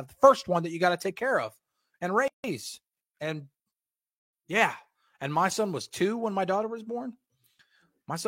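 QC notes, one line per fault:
2.28–2.44 s, gap at a join of encoded pieces: after "take care of and", a 161 ms silence cuts in with smeared edges. Separately encoded pieces were joined untrimmed, leaving encoder delay and padding.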